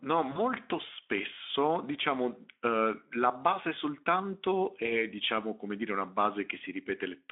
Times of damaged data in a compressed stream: none

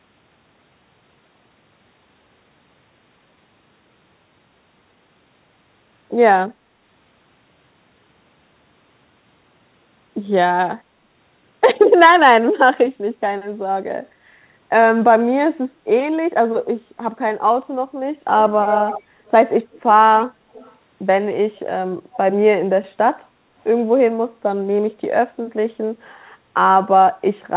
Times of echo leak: 18.41-19.31, 19.72-19.81, 20.53-20.75, 22.12-22.17

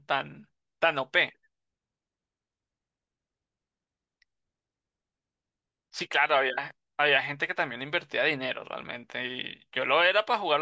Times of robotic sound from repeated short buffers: none

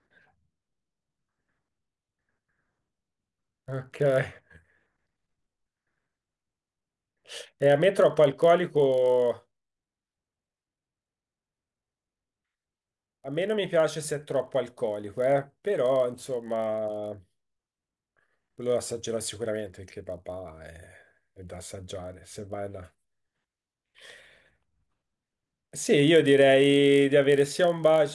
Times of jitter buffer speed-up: none

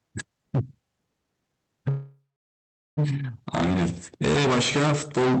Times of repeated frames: none

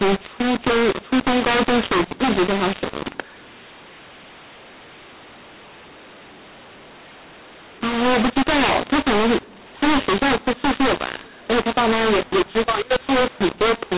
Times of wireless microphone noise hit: none

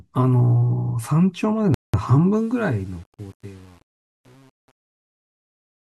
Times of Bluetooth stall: 1.74-1.94

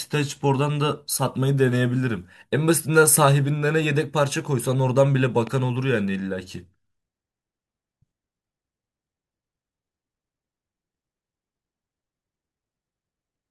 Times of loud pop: 5.47-5.49

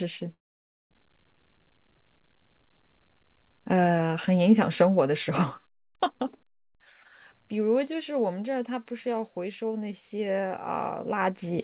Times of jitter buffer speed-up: 1.02-2.55

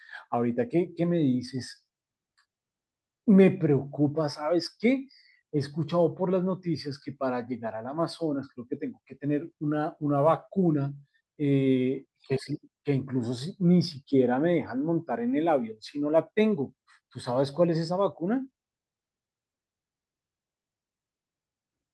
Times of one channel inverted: none

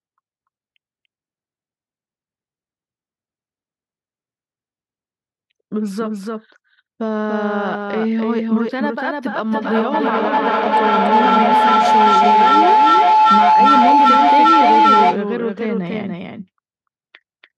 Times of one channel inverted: none

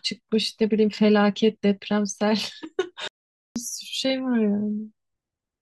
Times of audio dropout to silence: 3.08-3.56

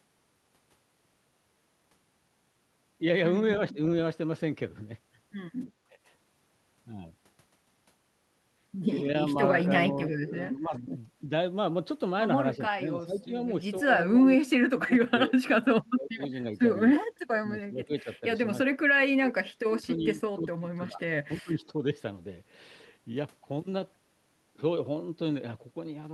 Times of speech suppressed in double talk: 3.72-3.78, 5.89-5.98, 9.83-10.91, 12.56-13.33, 14.18-16.21, 17.11-18.23, 18.63-21.84

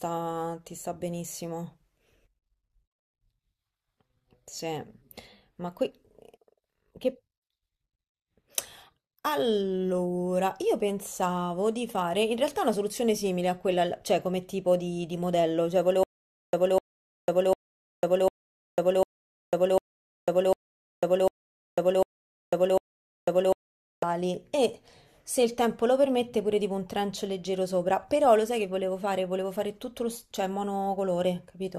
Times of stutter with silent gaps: 16.03-24.03

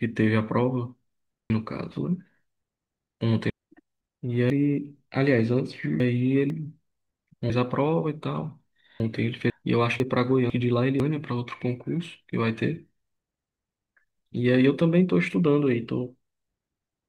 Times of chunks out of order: 1.50-3.50, 4.50-6.50, 7.50-9.50, 10.00-11.00

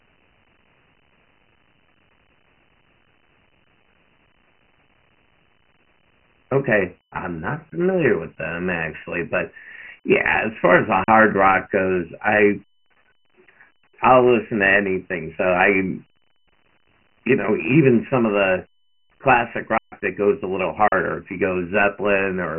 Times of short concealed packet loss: none

